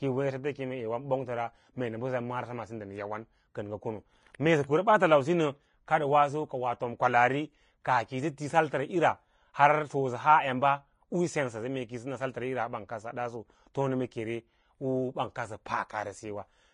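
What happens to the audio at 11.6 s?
At 11.6 s the speech carries the same damage it has from start to finish: nothing is present above 10.5 kHz, and the treble beneath that limit is hissy and grainy, with consonant onsets smeared and tonal parts roughened. This is likely Vorbis compression at a low setting, consistent with a bitrate near 30 kbps. The encoder lowered its cut-off and quantised the upper band so coarsely that fine detail was replaced by noise of similar energy.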